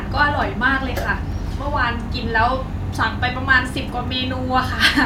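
From 3.48 s to the end, a filter restarted on every block, losing its state every 40 ms, so the speech carries a 25 Hz buzz that follows its level.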